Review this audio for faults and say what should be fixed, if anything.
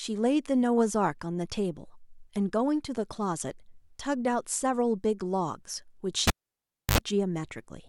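A cable pulled and plugged in cuts the speech from 6.27 to 6.98 s: a pop, about 660 ms of near silence, 70 ms of 50 Hz mains buzz while only the plug tip touches, then another pop. The waveform shows two spikes around a flat gap, and the spectrogram shows broadband vertical lines with a short stack of 50 Hz harmonics between them.

Secure the connector before recording, and mute the channel before changing any cable.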